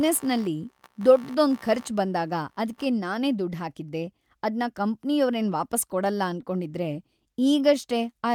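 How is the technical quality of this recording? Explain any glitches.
The recording has three technical faults: an electrical noise at the start and two brief timing glitches near the end.

Computer activity noise runs from 0.0 to 2.85 s, ending just before "ನಾನೇ ದುಡ್ ಹಾಕಿದ್ದೆ ಅದ್ನ". Processor or peripheral load shifts the audio circuit's shared ground, producing a buzzy pulsing of about 70 Hz, roughly 25 dB below the speech. It follows the computer's activity rather than the speech.

Repeated stalls (stutter) occur between 6.05 and 6.45 s. Packets arrived late, so the jitter buffer ran dry four times. Each time, the receiver extended the last sound, filling 34 ms in total (the longest single stall was 11 ms). Nothing is lost, but the speech catches and drags.

Jitter buffer slow-down occurs from 7.44 to 7.99 s. The receiver was rebuilding its reserve by repeating single pitch periods, which adds 49 ms. 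The speech plays at about 92% speed at unchanged pitch, so the sounds are drawn out.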